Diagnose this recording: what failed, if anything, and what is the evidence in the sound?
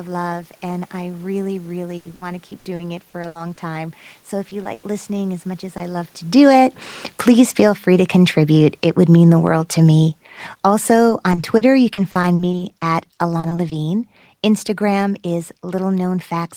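Network stage, repeated packet loss (robotic sound): packets went missing again and again in two stretches. From 1.97 to 3.59 s, nine gaps totalling 420 ms were patched, about a quarter of that span, the longest 80 ms. From 11.09 to 13.73 s, seventeen gaps totalling 440 ms were patched, none longer than 40 ms. Each hole is filled by stretching the last sound, so the speech turns choppy, with pieces missing.

Network stage, short concealed packet loss: isolated holes of 20 ms each reached the decoder too late, at 4.49, 4.63 and 5.77 s. The one at 4.63 s falls just before "listening as much as". The receiver bridged each hole by carrying the preceding sound forward from its pitch or as shaped noise, then blended back into real audio. Each one is a brief smear or wobble where a short consonant can disappear.

Network stage, burst of packet loss: a run of about 100 ms, 4.73 to 4.85 s, arrived too late to play, immediately before "listening as much as". 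Concealment held the last sound and faded it across the gap rather than leaving silence. The result is a short held buzz or hiss, and then the speech resumes further along with the material in between gone.

Call processing, automatic gain falling: from 6.22 s, right after "love to", through to the end, the automatic gain control judged the input too loud or its background too strong and lowered its gain step by step. The speech and its room background sink together, which distinguishes this from the talker shifting position around 6.0 s. That movement changes only the voice level and is not a fault.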